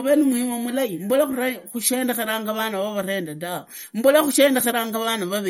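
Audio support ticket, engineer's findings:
MP3 compression, throughout the whole clip. Speech sounds watery and swirly, with chirpy metallic edges on s sounds and smeared consonant attacks. Nothing above 17.2 kHz. Likely cause: an MP3 encoder starved of bits, which fits a low bitrate around 48 kbps. Weak frequency lines zeroed and flickering on and off between frames, treble cut at a fixed point. Damage plainly audible.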